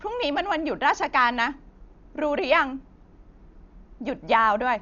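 From start to finish the speech sounds dull and muffled, with nothing above 7 kHz, and a rough, fluttering noise clings around the tonal parts of the voice. The damage is heavy, pointing to something near 48 kbps. This is likely Dolby Digital compression: starved of bits, the encoder narrows the band and leaves many frequency lines without mantissa data, so the decoder fills those gaps with dither noise instead of the original detail.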